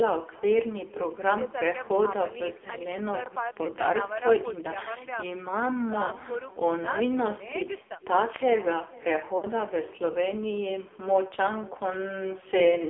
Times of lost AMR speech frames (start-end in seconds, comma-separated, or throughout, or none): 6.06-6.11, 9.38-9.45